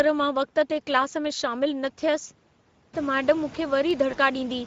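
Throughout the speech there is a hoarse, grainy roughness with a noisy edge on the voiced sounds. This is Speex codec damage: at about 16.8 kbps the CELP coder has too few bits to model the excitation cleanly, so the signal comes out plainly degraded.

At 2.98 s and again at 3.91 s there is a single sharp click, each one an isolated tick. The likely cause is dropped samples: a handful of samples, well under a millisecond, went missing, and the waveform jumped straight to a later value. The first click lands just as the room noise rises, by about 19 dB, around 3 s.

From 4.11 to 4.17 s the speech turns briefly stretched and thin, then fades before recovering. This is VoIP packet loss concealed by the speech codec. One 20 ms frame was lost, and the decoder filled the gap by extrapolating its last pitch and filter at falling gain. Because each frame builds on the one before, the weakness carries past the gap itself.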